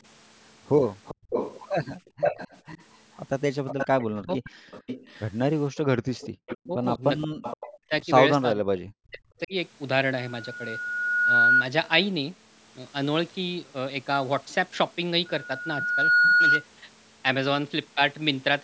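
From 1.05 to 6.66 s an echo leak runs under the speech: a delayed copy trailing the talker by about 470 ms and sitting only about 5 dB below it. The likely cause is a far-end loudspeaker whose echo canceller failed to subtract what its microphone picked up, so the residue was sent back down the line. A shorter, weaker return recurs from 7.21 to 7.68 s at the same delay, about 10 dB down.

Inside that stretch, at 1.15 to 1.29 s and again at 5.96 to 6.38 s, the background is gated by the echo canceller. The room tone collapses by about 35 dB for roughly 150 ms and then by about 36 dB for about 200 ms before recovering, because the canceller clamped the microphone path hard while its loudspeaker was active.

At 4.23 to 4.51 s, and more severely from 6.66 to 9.54 s, the audio shows speech suppressed in double talk. The talker's level drops by around 40 dB in pieces, briefly at first and then for a total of about one and a half seconds across the later span, so the voice cuts in and out. 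This fits a canceller that likely could not separate the local talker from the loudspeaker echo while both sides spoke, and so attenuated everything.

From 15.25 to 16.67 s a loudspeaker feedback squeal develops. A 1.4 kHz tone grows over about a second until it stands roughly 10 dB above the program. A microphone was picking up the loudspeaker it feeds, and at that frequency the loop gain exceeded one, so the tone kept reinforcing itself.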